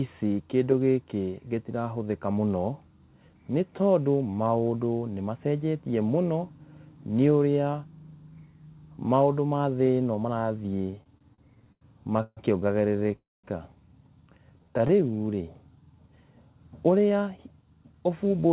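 From 10.9 to 12.39 s the speech hits repeated stalls, a stutter: the jitter buffer kept running dry, so the receiver stretched the last sound across 12 gaps, about 404 ms in all and the longest 144 ms. Nothing's lost, but that stretch drags and hiccups. It happens again, more briefly, from 12.97 to 13.15 s, with four tiny gaps of around 10 ms each.

Right after, from 13.17 to 13.46 s, there's a call audio freeze. The sound carries on for a moment, then drops to silence for about 210 ms of the 270 ms pause, and picks up where it left off. That's likely packets held up in transit, which added a 270 ms delay.

Between 14.52 and 15.43 s you get a jitter buffer slow-down. The receiver repeated pitch periods to rebuild its reserve, adding 120 ms, so the speech runs at 88% speed with the same pitch and sounds drawn out.

From 17.10 s to the end there's a jitter buffer speed-up. The buffer held too much, so the receiver trimmed short pieces, around a fifth of a second in total. 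The speech runs at 113% and sounds hurried. Throughout, nothing comes through above 4 kHz, which fits G.711 mu-law at 64 kbps on the call path.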